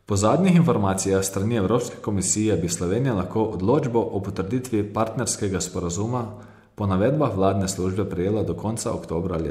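Nothing goes wrong anywhere in this stretch of speech, so there's no fault to point to at any moment.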